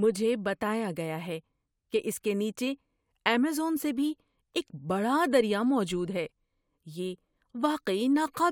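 No technical faults are audible anywhere in the speech recording.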